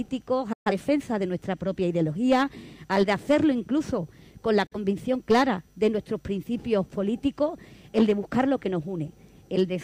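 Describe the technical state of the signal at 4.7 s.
A digital broadcast dropout runs from 4.66 to 4.76 s. The receiver stopped getting usable data, either losing the signal or rejecting frames that failed their checksum, and muted until good frames returned. The sound fades out over about 8 ms, leaving a gap of roughly 43 ms, which fits a single lost frame, before it comes back. Whatever was transmitted during that hole is gone rather than merely quieted.

Hard clipping is present at this moment as well, because it runs through the whole clip. The signal is driven about 6 dB past what one stage can pass, so its peaks are sliced flat. Less than one percent of samples hit the ceiling, so it is heard as brief crackle on the loudest peaks, with the squared-off tops adding harmonics high up the spectrum.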